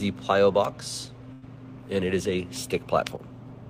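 At 1.33 s there is a short stall from a late packet, lasting until 1.45 s. A packet missed its playout time and the jitter buffer ran dry. The receiver held the last bit of sound for about 92 ms until the packet came in. Playback then resumed from the same point, so nothing is lost. The sound simply hangs too long, with a faint buzz or dip. Everything after it runs 92 ms later than before.

From 3.16 to 3.21 s the level drops abruptly by about 6 dB for 50 ms, then returns. This is likely one channel dropping out. With one side of the stereo pair gone, the mono sum keeps only half of what both channels shared. Anything carried only by the missing channel vanishes for that moment. It sounds like a brief, abrupt dip in level.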